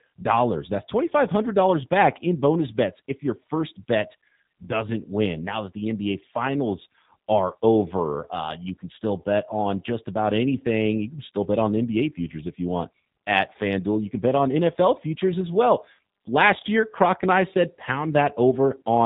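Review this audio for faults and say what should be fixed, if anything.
Throughout the recording the speech sounds slightly rough and synthetic, with a thin, band-limited tone and nothing audible above 4 kHz. This is plainly audible G.729 codec damage, and the character points to the G.729A variant at about 8 kbit/s. That codec models each 10 ms frame with a vocal tract filter, a pitch predictor and a handful of pulses, and it discards the upper band. The result stays intelligible, but texture is lost across the whole clip. To prevent this, capture or route the audio through a wideband or lossless path rather than a narrowband VoIP codec.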